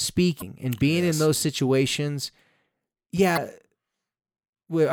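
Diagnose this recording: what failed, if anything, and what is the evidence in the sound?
Two brief disturbances, at 0.38 to 0.43 s just before "and being yes in" and at 3.33 to 3.38 s, mark damaged data in a compressed stream at the codec stage. Corrupted bytes made the decoder misread those frames, lose sync and jump to the next frame header.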